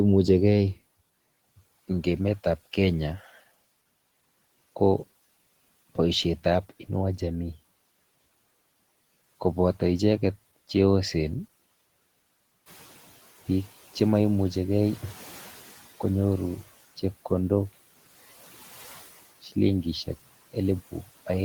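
At about 12.5 s the room noise rises by about 11 dB, and the noise suppressor catches up from 12.66 to 13.22 s. Its noise estimate lags the jump, so the louder noise first passes through under-reduced, then sinks by about 11 dB over roughly 560 ms as the estimate adapts.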